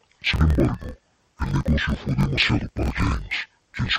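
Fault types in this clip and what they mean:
Interleaved audio read as planar: Each 24 ms block's alternating samples get split in halves. The speech plays an octave low, doubled and choppy throughout.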